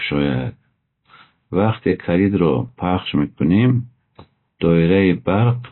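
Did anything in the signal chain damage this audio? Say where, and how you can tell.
Yes. The codec stage, most likely MP3 compression, damaged this speech throughout: nothing survives above about 4 kHz, and sibilants sound swirly and watery. That fits a low bitrate near 24 kbps. Weak frequency lines flicker between frames, which separates this from a plain low-pass filter.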